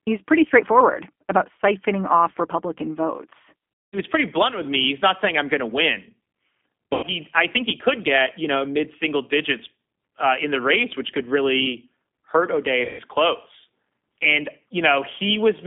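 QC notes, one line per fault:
Throughout: G.729 codec. The sound is confined to a 200 Hz to 3.5 kHz line band, and the plainly audible rough, synthetic edge comes from rebuilding the voice out of a vocal tract filter, a pitch predictor and a few pulses per frame, consistent with 8 kbit/s G.729A.
3.81–3.99 s, 6.93–7.06 s, 12.85–13.01 s: VoIP packet loss concealed by the speech codec. Gaps of about 200 ms, 100 ms and 140 ms, which fits 20 ms packets, are filled by the decoder stretching its last pitch and filter into a fading buzzy tone or coloured noise. Recovery sounds weak or distorted going into "pretty blunt with me" and "he I think he".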